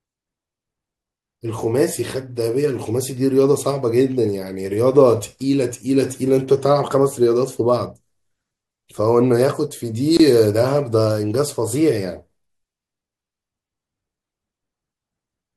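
A speech recording with one problem: a gap at a join of encoded pieces, running from about 10.17 to 10.20 s. For roughly 25 ms the speech just drops to silence, with smeared edges, then resumes exactly where it left off. That's what you get when separately encoded segments are butted together without trimming, so the encoder's leading delay and last-frame padding end up sitting in the middle of the talk.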